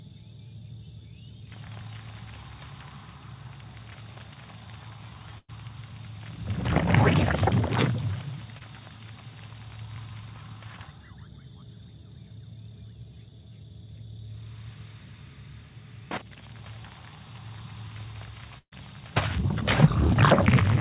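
From 5.38 to 5.50 s the sound stretches into a held, fading continuation and then drops briefly to silence (about 30 ms) before picking up later than it should. This is a burst of packet loss. Roughly 100 ms of audio never arrived in time, so the receiver extended the last sound for about 100 ms, lowering its level as the gap grew, then skipped ahead past the missing stretch.

At 8.58 to 8.62 s there is a brief smear, a short wobble rather than a dropout. This is short concealed packet loss. About 20 ms failed to reach the decoder, and the receiver bridged the hole by continuing the preceding sound for a similar length before blending back into the real signal.

The second burst of packet loss, from 18.58 to 18.74 s, is longer. A drawn-out, decaying continuation is followed by about 70 ms of silence. Around 140 ms of audio is gone, with roughly 130 ms filled by the extended sound before playback resumes further on. 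Throughout the clip the band stops at 4 kHz, which fits G.711 A-law at 64 kbps on the call path.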